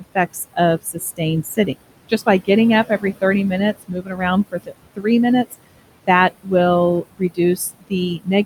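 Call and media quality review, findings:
Noise suppressor artifacts, whole clip: background pulled down by about 21 dB between phrases, then bobbing back up under the talker. The suppressor's per-band gain tracks speech frame by frame, so the leftover room noise (sitting about 14 dB under speech) rises and falls with the talker.

Speech cut by the noise suppressor at 0.0–1.69 s, 3.79–5.06 s, and 7.02 s to the end. Quiet bits and word tails get swallowed, dipping about 16, 16 and 20 dB. Roughly 200 ms lost in the first span, about half a second in the second. Suppressor is misreading soft speech as noise.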